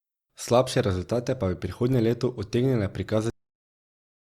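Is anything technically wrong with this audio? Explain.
Yes. This speech clip has a cut-off end at 3.3 s. The audio stops abruptly in the middle of a sound and falls straight to digital silence, which holds until the clip finishes. There is no natural decay or room tail. The final stretch of audio buffers was never written out, so playback simply runs out of data instead of reaching a real ending. The result is a sudden truncation rather than a fade.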